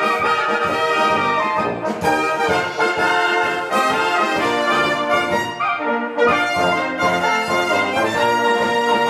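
No technical faults can be heard anywhere in it.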